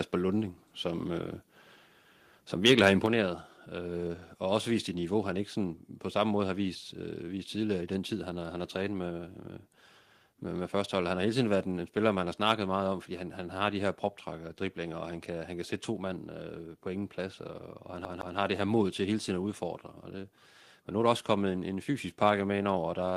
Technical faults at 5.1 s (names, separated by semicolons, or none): none